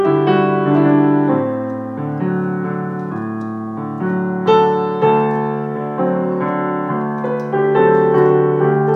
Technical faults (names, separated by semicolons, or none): none